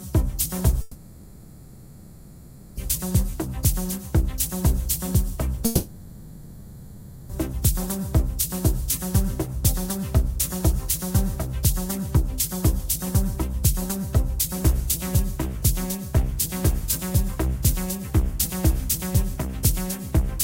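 From 0.81 to 2.79 s, and again from 5.65 to 7.31 s, a long network dropout is likely. The last sound smears into a fading buzz, then low steady noise. The sound resumes later, with those stretches missing.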